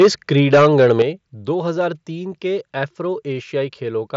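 A short speech clip with microphone overload at 0.00 to 0.08 s and again at 0.53 to 1.02 s. The peaks run about 7 dB past the converter's limit. Their flattened tops give a harsh crackle. Many samples clip in the first burst, fewer in the second. An input gain set too high is the likely cause. There is also a microphone volume step-down at 0.02 s, of about 2 dB, and at 1.02 s, of about 7 dB, just before "दो हजार तीन". The voice and background drop together at once. This is likely the call software cutting the input gain after clipping. The headset link passes nothing above about 7.7 kHz.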